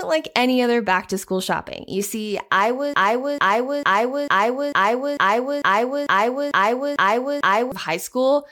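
Broken-record loop from 2.94 s to 7.72 s in this speech clip: a 447 ms fragment repeats 11 times, exactly and back to back, so the same slice of sound keeps cycling instead of moving forward. The likely cause is a player, encoder or stream that stalled and kept re-sending the last chunk it still held. Whatever speech belonged in those nearly five seconds never plays and is lost.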